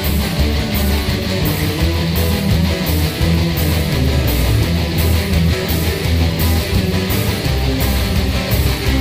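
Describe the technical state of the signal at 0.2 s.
The signal at 0.2 s is intact, with no audible fault at that moment.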